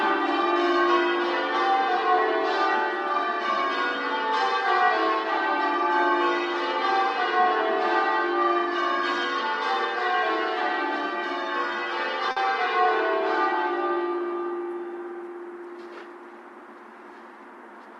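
At 12.31 to 12.38 s, a short stall from a late packet: the jitter buffer ran dry, holding the last sound 50 ms longer, with nothing lost.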